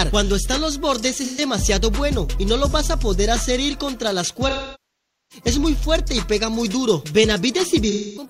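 AAC frame loss with concealment strikes three times: the decoder lost data and rebuilt it from the last good spectrum. At 1.22–1.41 s, roughly three frames, it leaves a smeared, phasey patch; at 4.49–5.44 s the sound decays towards silence; a final gap runs from 7.90 s to the end.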